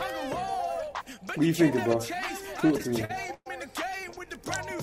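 From 2.57 to 3.48 s there's a run of repeated stalls, classic stutter: packets weren't arriving fast enough, so the jitter buffer kept running dry. Ten times the receiver stretched the last bit of sound, about 264 ms in all and up to 117 ms at once, roughly 29% of that stretch. Nothing's actually lost, it just drags and hiccups. A lighter bout follows at 3.94 to 4.28 s, seven brief stalls of at most 17 ms.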